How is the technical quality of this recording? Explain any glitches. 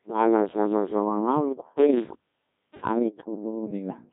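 Quality is poor. The whole recording is heavily degraded by a low-rate vocoder, and a loose connection cuts the sound out in the middle.

The Codec 2 vocoder damage runs throughout. The decoder rebuilds the speech from pitch, voicing, energy and a coarse spectral envelope, so it sounds robotic and buzzy, with heavy damage that fits a rate around 1.6 kbit/s. A spectrogram shows regular synthetic harmonics and nothing above 3.8 kHz.

An intermittent contact occurs between 1.79 and 3.02 s, where a loose cable or plug opens for about 0.61 s in total. The sound drops out with crackle at the edges, leaving faint hiss. The waveform shows an abrupt near-silent gap edged by sharp spikes.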